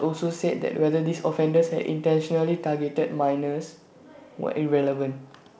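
No technical faults are heard in this speech, carried by G.722 wideband telephone coding at 64 kbit/s.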